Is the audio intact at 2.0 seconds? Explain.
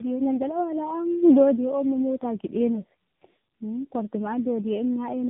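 No: tandem speech coding runs throughout, each codec re-encoding the last one's degraded speech, so it sounds rough and warbly. A spectrogram shows nothing above 3.8 kHz.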